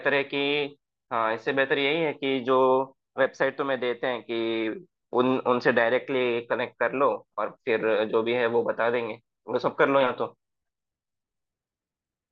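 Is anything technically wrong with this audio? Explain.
No, nothing technically wrong can be heard in this speech recording. There are no faults to point to at any moment in it.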